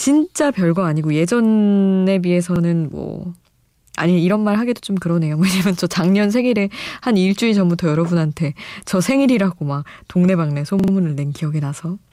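Twice, fresh audio failed to reach the playback device in time, so it replayed its last buffer, a repeated buffer fault. At 2.56 to 2.60 s one piece of speech about 43 ms long plays an extra time, which fits a 2048-sample buffer, giving a quick stutter with a hard join. At 10.80 to 10.92 s the same length repeats three extra times, a longer stutter. Nothing appears to be skipped; the sound simply resumes afterwards.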